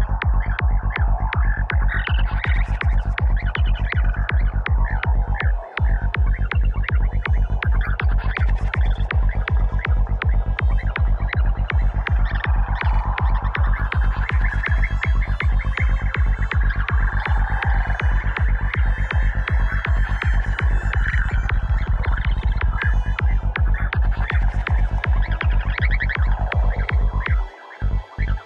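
Software has likely time-stretched a section from 20.9 to 22.78 s, squeezing it to play at about 1.99 times normal pace by dropping short pieces. This is a time-stretched section: the pace jumps abruptly while the pitch holds steady, leaving the audio rushed.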